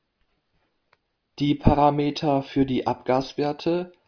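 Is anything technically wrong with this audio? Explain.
No, nothing technical stands out in this speech recording; there's nothing here that needs fixing.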